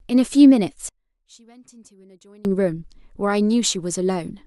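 From 0.89 s to 2.45 s the speech collapses when heard in mono, dropping by about 27 dB to a faint trace before returning at full level. The likely cause is one channel inverted: one side of the stereo pair has its polarity flipped, so the centred speech, identical in both channels, cancels itself on summing, leaving only the small differences between left and right.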